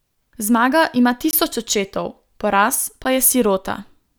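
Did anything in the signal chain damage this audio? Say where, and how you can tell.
Yes. Two blocks of digital silence in this speech point to the driver or buffer stage. The signal drops to silence from 1.31 to 1.33 s (20 ms) and again at 3.04 s (10 ms). The output buffer was likely not filled in time, so zeros went out instead. On the waveform these show as near-flat stretches with abrupt steps, and on the spectrogram as dark vertical slots.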